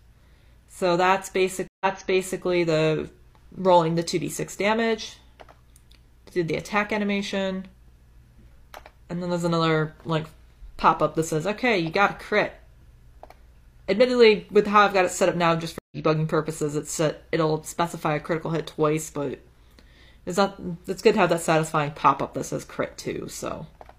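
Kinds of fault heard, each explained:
Stream reconnect: The audio drops out for about 0.13 s at 1.68 s and comes back 0.60 s earlier in the material, so a stretch repeats. At 15.79 s a similar 0.13 s gap ends with the sound jumping ahead by roughly a tenth of a second. Both breaks come from the connection failing, the player going quiet while it reconnects, then starting a fresh decoder partway into the stream.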